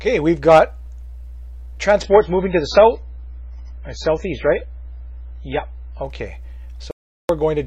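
At 2.04 s the sound abruptly turns dull and papery: everything above about 7.5 kHz vanishes, and what remains takes on a swirly, metallic edge that lasts until 6.04 s, when full brightness snaps back with no gap either way. This is an adaptive stream at a lower bitrate. The player switched to a cheaper version of the same stream when the connection slowed. The heavy band-limiting and artefacts point to a drop from roughly 128 kbit/s MP3 to something near 16 kbit/s, where the encoder discards the treble and smears what it keeps.

From 6.91 s to 7.29 s the audio cuts to silence for about 380 ms, with no background or room tone at all, then resumes abruptly mid-flow. This is an audio dropout to silence. The hard edges and silent gap show that the signal itself stopped arriving while the recording chain kept writing silence, most likely because the input link or device briefly disconnected. 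Whatever sounded during that gap is lost.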